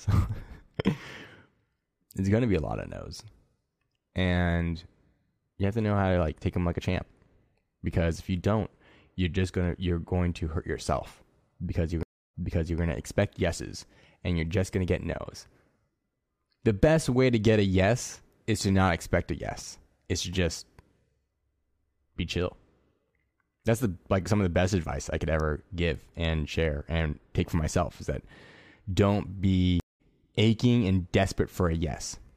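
At 12.03 s, after "hurt yourself because you're", a stream reconnect leaves 308 ms of silence, then resumes 464 ms earlier, replaying audio before "to expect yeses and". At 29.80 s another falls silent for 198 ms and resumes roughly 150 ms later, skipping into "aching and". Unlike a simple dropout, the timeline jumps.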